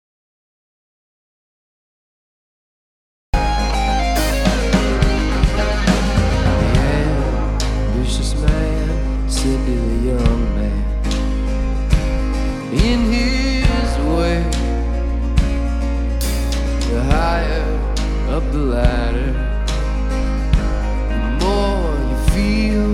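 Right from the top, the clip opens in the middle of an audio dropout to silence: the first 3.34 seconds are silent, no room tone at all, before sound abruptly kicks in. The input was likely disconnected or muted while recording carried on.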